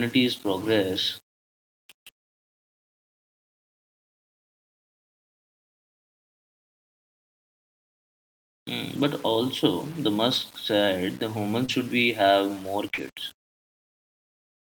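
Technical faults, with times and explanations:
Throughout: low bit depth without dither. The speech carries a grainy distortion that tracks it, with noise about 25 dB below the signal, and quiet passages turn gritty. The likely cause is rounding to about 6 bits with no dither.
8.95–9.05 s, 11.68–11.70 s, 12.98–13.00 s: lost packet rebuilt from error correction. These 60 ms and two 20 ms stretches sound rougher and noisier, without gaps. Each lost packet was replaced by its low-bitrate copy, carried in the packet that followed.
11.65–11.70 s, 12.94–13.00 s: short concealed packet loss. Brief smears occur where 20 ms and 40 ms never arrived. The decoder stretched the preceding sound over each hole, then blended back into the incoming audio.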